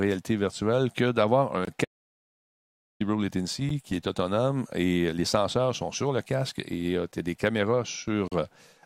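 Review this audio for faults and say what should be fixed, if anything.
Short Bluetooth stalls cut the speech to silence at 1.65–1.67 s, 3.69 s and 8.28–8.32 s, for 11 to 38 ms. The likely cause is delayed packets draining the headphone buffer. Unlike a dropout, each gap is brief and the speech resumes where it stopped. Keep the phone close and away from 2.4 GHz interference.

An audio dropout to silence runs from 1.85 to 3.00 s, about 1.16 s of silence with no room tone. It is likely caused by the input link failing while recording continued. Its length and the lost speech set it apart from the stalls. Secure the input connection and check mute states before recording.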